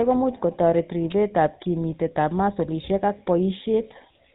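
The whole recording has passed through the GSM full-rate codec, and its damage is plainly audible. Instead of sending the waveform itself, this early mobile codec models the throat and mouth as a filter and excites it with a sparse train of regularly spaced pulses, discarding most of the fine detail in between. Everything above 4 kHz is gone, so the speech sounds narrow and dull, with a gravelly, buzzy roughness layered over it, which fits a 13 kbps GSM stream.

At 1.11 s, right after "ko much kotoreti" and just before "kimitetab masolishek ak", a sharp snap lasting only about 12 ms cuts across the sound. It is most likely an electrical switching spike, a brief arc from a nearby switch, motor or static discharge picked up by the audio line and added on top of the speech.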